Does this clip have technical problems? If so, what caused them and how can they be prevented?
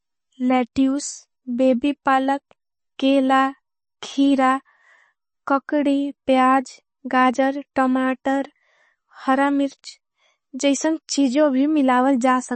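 Yes. The speech sounds watery and swirly throughout, with nothing above 8.3 kHz, which points to a starved bitrate around 30 kbps. This is likely MP3 compression: the encoder chops the treble and drops weak frequency lines that flicker between frames. Encode at a higher bitrate to prevent it.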